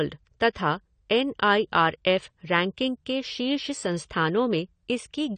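From the start, the speech sounds plainly dull and smeared, with nothing above 9 kHz and a fizzy, warbling texture on sibilants and sustained sounds. This is likely AAC compression: the encoder cut the top band and coarsely quantised the rest, which fits a low bitrate around 32 kbps.

At 0.53 to 0.55 s, a brief hiss of about 23 ms runs just ahead of a sharp attack, and the onset sounds softened. This is pre-echo: quantisation noise sized for the loud attack was spread across its whole block, filling the quiet moment before it.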